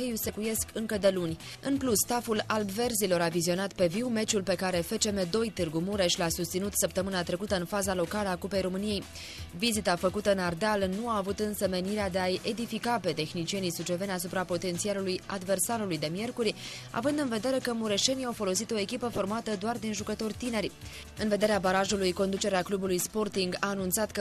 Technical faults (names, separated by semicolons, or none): corrupt frame decoded